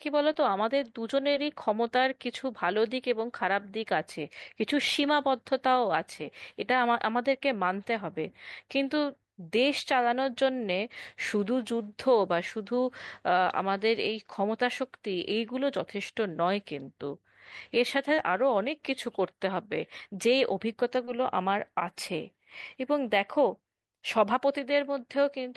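Speech with short concealed packet loss at 0.33, 1.31, 18.15 and 21.05 s: about 20 ms of audio missed the decoder each time and was patched from preceding sound, leaving brief smears.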